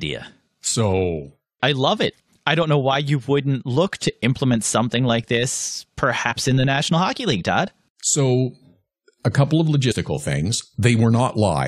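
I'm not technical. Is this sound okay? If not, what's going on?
No. Damaged data in a compressed stream at 6.31–6.33 s (after "implement something like this") and 9.90–9.93 s (after "a couple of"): corrupted file bytes make the player stumble, causing brief glitches.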